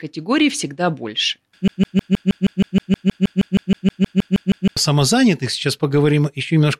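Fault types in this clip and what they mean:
Broken-record loop: A short slice of the speech, about 0.16 s long, plays over and over with no gap. It starts at 1.68 s and repeats 20 times until 4.77 s. Each pass is identical, so the sound stutters like a stuck record. The speech that belonged in those 3 s never arrives. The likely cause is a stalled player or stream that kept resending the last fragment it held.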